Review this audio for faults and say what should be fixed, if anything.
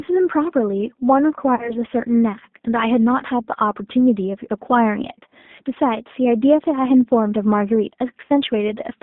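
G.729 codec damage runs throughout the clip. This 8 kbit/s coder rebuilds speech from a vocal tract filter, a pitch predictor and a few pulses per subframe, so the sound is rough and synthetic, confined to roughly 200 Hz to 3.7 kHz. Prevent it by negotiating a wideband codec such as G.722 or Opus at a higher bitrate.

VoIP packet loss concealed by the speech codec occurs at 1.55 to 1.76 s and at 8.25 to 8.30 s. Each event drops about 40 ms of audio, which fits two 20 ms packets. The decoder fills the gap by extending its last pitch and filter into a buzzy tone or coloured noise that fades. At 1.55 s the weakened, distorted sound lingers beyond the gap because each frame builds on the previous one. Prevent it with a larger jitter buffer, forward error correction or a more reliable network path.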